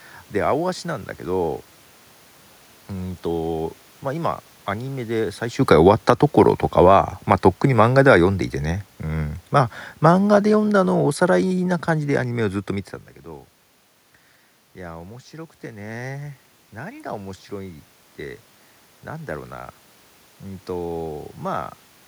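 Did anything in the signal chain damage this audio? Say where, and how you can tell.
Yes. The damage happens in call processing, where automatic gain control acts twice in the same direction. This is automatic gain falling. The talker's level at the microphone shifts around 5.5 s. From 5.57 to 8.28 s the level then sinks by about 4 dB. From 9.53 to 12.29 s it drops by about 5 dB more. You can tell it is the gain stage because the room noise sinks with the voice. A talker moving would not lower the background.

Automatic gain rising follows, also in call processing. The talker moves again around 13.0 s, and the level at the microphone falls by about 15 dB. From 14.75 to 20.74 s, voice and room noise swell together slowly, by about 6 dB. That shared rise over several seconds is the control loop adding gain back. It recovers only part of the loss, so the voice stays about 9 dB quieter than before the move.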